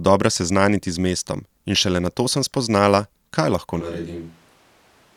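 At 3.82 s, right after "sem spoznala kaj lahko", the speech turns abruptly roomy and hollow and stays that way to the end. The low end thins out, the level falls by roughly 5 dB, and background noise rises to around 25 dB below the speech. This is a switch to a distant microphone, most likely because the close microphone's signal dropped out and a farther pickup carrying more of the room took over.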